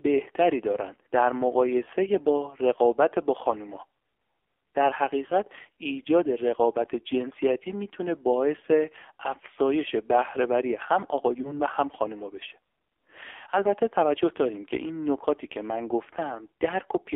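The whole clip runs through the AMR narrowband mobile codec, and it's hit hard. The speech sits in a telephone band of roughly 300 Hz to 3.5 kHz with nothing on top, and it has that buzzy, synthetic edge you get when the vocal-tract model is fed very few bits. That fits one of the low AMR-NB modes, around 5.9 kbps. The heavy coding damage runs from start to finish.

On top of that there are three spots of lost AMR speech frames, each sounding like a single frame gone. At 1.84 to 1.90 s, 11.42 to 11.61 s and 13.36 to 13.41 s, the decoder papers over the gap by reusing the last good pitch and spectral settings with the gain pulled down. You hear a brief dip or warble before the speech comes back, a little rough for a moment. The one at 11.42 s smears on longest.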